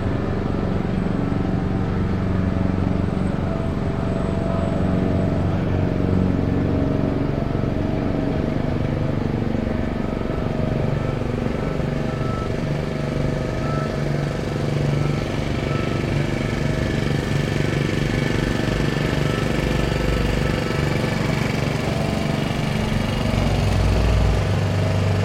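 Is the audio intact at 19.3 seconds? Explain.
Yes, the audio is intact at 19.3 seconds, with no dropout, click, distortion or other fault at that moment.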